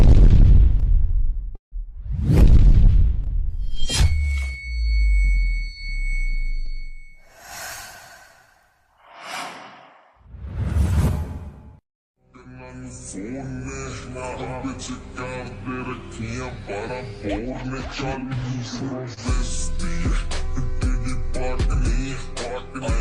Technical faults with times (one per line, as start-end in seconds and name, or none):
1.55-1.74 call audio freeze
18.23-19.03 jitter buffer speed-up
19.14-19.19 short stall from a late packet